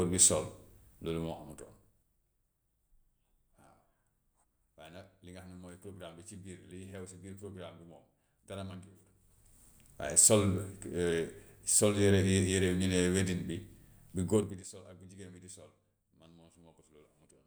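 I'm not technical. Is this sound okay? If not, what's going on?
No. From 14.32 to 14.68 seconds, as the speech is turned down sharply, a fast ticking or zipping sound rides on top of it. This is zipper noise. Instead of gliding down, the volume drops in small jumps, about thirty times a second, and each jump leaves a tiny click. Strung together, those clicks make the zipping.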